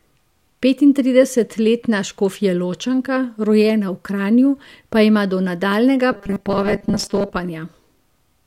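Robotic sound from repeated short buffers appears from 6.12 to 7.33 s, just after "pa ima do nadaljnjega". The speech turns into a stiff metallic buzz near 200 Hz, likely from late-arriving audio being covered by replaying roughly 5 ms chunks through most of that stretch.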